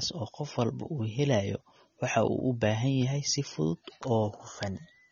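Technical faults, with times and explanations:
Throughout, AAC compression: the speech sounds dull and smeared, with a warbling, fizzy edge on sibilants and nothing above 7.2 kHz. This is likely low-bitrate AAC-LC, fitting about 24 kbps, where the encoder drops its cut-off and starves bands of bits.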